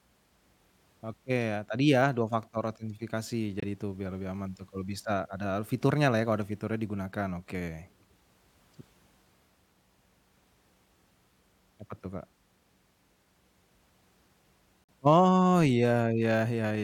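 At 3.60 s, after "faktor autentifikasi" and before "itu biar lebih aman", and again at 14.84 s, corrupt frames were muted: abrupt silent gaps of 44 ms and 56 ms, each consistent with two dropped frames, with timing preserved.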